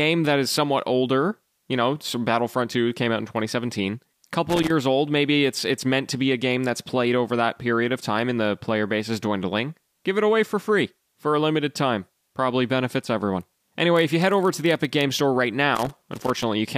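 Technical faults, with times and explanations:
4.49–4.70 s, loose connector crackle: an irregular burst of scratchy crackle just before "old maybe it's it's". A worn or dirty contact is rapidly making and breaking, chopping the signal on and off, and any DC on the line turns each break into a pop.
13.92–15.05 s, block size mismatch (padded): right after "benefits everyone" a steady buzz at 43.1 Hz rides under the speech, with the pace very slightly slowed, by about 0.1 percent. One stage is delivering blocks shorter than the next reads, likely a 1024-sample read at 44.1 kHz, and the shortfall is zero-filled, inserting a tiny gap every block.
15.75–16.43 s, loose connector crackle: a second, longer stretch of ragged crackling and scratching near the end. The same intermittent contact is again breaking the connection in rapid, uneven bursts, so the audio is chopped.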